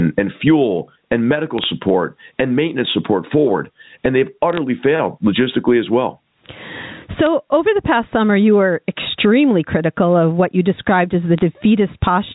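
Gain pumping runs through the whole speech clip, with the level swinging by around 20 dB. The likely cause is a microphone gain set far too high, with a fast limiter or compressor clamping it on each peak. Quiet and loud passages end up close in level, and the speech sounds squashed.

Bit errors on a digital phone line appear as short bursts of crackle at 1.58–1.65 s, 4.53–4.58 s, 7.26 s and 11.38–11.41 s. On this G.711 A-law telephone path, each flipped bit corrupts a single 8-bit sample. Where the error lands on a high-order bit, or on the sign bit of a loud sample, that sample jumps far from its neighbours and produces a sharp tick. A small fraction of a percent of bits went bad in each burst, enough for a cluster of clicks laid over the speech, which itself is unchanged.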